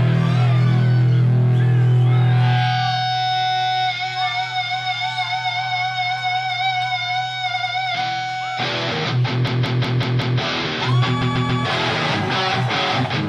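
From 5.49 s to the end, channel delay (comb filtering) sets in. One channel trails the other by a tiny offset, about 0.02 ms, consistent with a single-sample delay. When the two are summed, cancellation begins near 20 kHz, so the very top end sounds dulled.

At 7.53 to 7.72 s, repeated frames play a 92.9 ms block two extra times. This produces a short stutter that adds 185.8 ms. The same fault returns at 11.21 to 11.63 s, where a 139.3 ms block plays three extra times and adds 418 ms.

Between 9.47 and 10.40 s, a system hang loop occurs. Playback stalls while the hardware keeps cycling one 185.76 ms segment, which fits an 8192-sample ring buffer. The segment repeats five times at 5.38 Hz, producing a machine-gun stutter.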